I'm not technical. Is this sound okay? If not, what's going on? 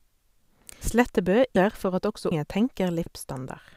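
No. The speech skips at 0.81, 1.56, 2.31 and 3.06 seconds. This is audio missing between chunks: roughly a third of a second vanishes at each point, and the sides are butted together. The likely cause is a recorder working in one-second pieces.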